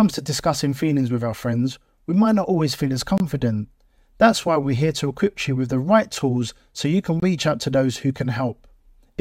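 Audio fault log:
3.18–3.20 s and 7.20–7.22 s: gap at a join of encoded pieces. The speech drops out for about 23 ms, recurring every 4 s, because separately encoded segments keep their start delay and final-frame padding.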